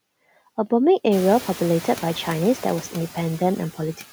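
Noise suppressor artifacts run throughout. The suppressor cuts steady noise by about 12 dB, so the noise floor sinks between phrases and returns under speech, most noticeably once the room noise rises around 1 s. On a spectrogram, the background band looks patchy and gated.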